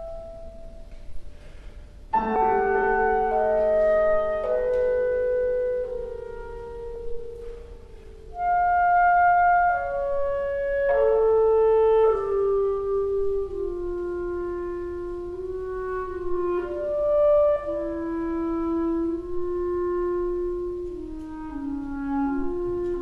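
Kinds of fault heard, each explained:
Compressed frames skipped: at 2.35 s and again at 6.95 s the audio jumps forward, losing roughly 70 ms each time. That gap fits about three whole frames of around 26 ms each, dropped because they were missing or rejected as damaged before decoding.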